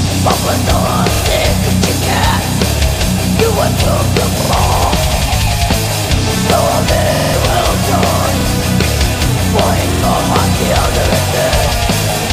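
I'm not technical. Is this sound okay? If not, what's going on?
No. There's a repeated buffer fault: fresh audio arrived late, so playback replayed its last chunk of about 46 ms instead. You'll hear quick stutters at 1.16, 4.41, 7.15, 8.41 and 9.94 s. The one at 7.15 s repeats four extra times, so it's the longest.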